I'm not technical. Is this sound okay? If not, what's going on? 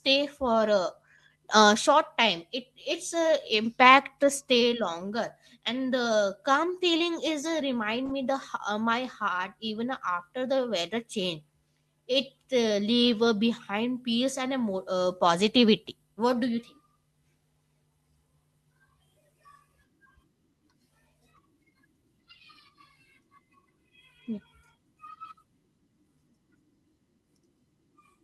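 Yes, nothing is wrong with this recording.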